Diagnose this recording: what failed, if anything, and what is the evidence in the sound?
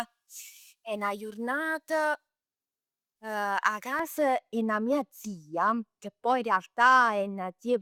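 Pre-emphasis left on, from 0.0 to 3.99 s, at the de-emphasis stage of the transmission or playback chain. The speech is thin, bright and hissy on sibilants. The treble sits about 11 dB above the 1 kHz level at 10 kHz, a tilt that fits a J.17 emphasis curve. The boost applied before transmission was never undone, so the high band stays lifted. The balance returns to normal just before "'e 'na mia".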